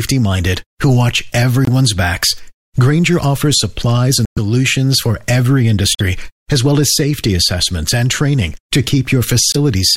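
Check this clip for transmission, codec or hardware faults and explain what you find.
There's one problem, repeated four times in this speech: corrupt frame muted. Short holes open up at 1.65 to 1.69 s, 4.25 to 4.39 s, 5.93 to 6.01 s and 9.52 to 9.56 s. Bit damage in the compressed stream made the decoder reject frames, and the player dropped in silence rather than guess. Each gap starts abruptly and timing holds afterward. The lengths, 40, 130 and 80 ms, point to one, five and three lost frames.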